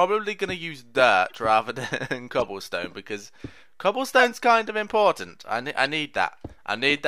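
Corrupt frames decoded: damaged compressed frames were played as received, scattering energy into wrong frequencies as brief chirps or noise bursts at 1.27–1.32, 2.40–2.45, 4.13–4.23 and 5.85–5.93 s, each spanning a few frames, faint at first, loudest at 4.13 s.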